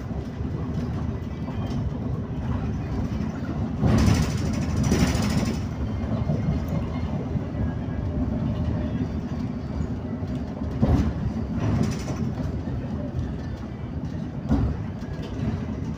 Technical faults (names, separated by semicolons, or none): none